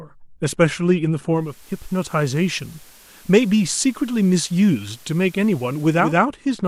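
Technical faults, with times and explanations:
1.27–6.29 s, digital radio blending to analogue: the receiver lost the digital stream and cross-faded over about 0.42 s to the station's FM broadcast, then back. Hiss rises to roughly 30 dB below the speech and the level drops by about 1 dB.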